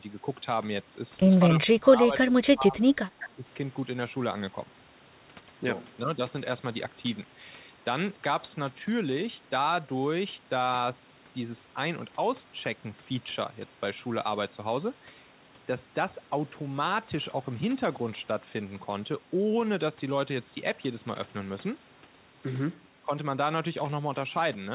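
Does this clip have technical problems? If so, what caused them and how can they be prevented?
Yes. From 1.54 to 3.49 s the speech dips by up to about 20 dB over roughly a second and a half. The waveform shows an amplitude trough and the spectrogram shows faded energy. This is likely speech suppressed in double talk: the echo canceller couldn't separate the talker from loudspeaker echo, so it turned both down. A double-talk detector with better convergence and less aggressive suppression would prevent it.

Between 3.21 and 3.27 s a faint delayed copy of the speech appears, 210 ms behind and about 20 dB below it. On a spectrogram it looks like a dim, shifted repeat of earlier harmonics. This is likely an echo leak, where residual loudspeaker pickup escaped cancellation and was sent back. Headsets, or a longer and better-adapted echo-canceller filter, would prevent it.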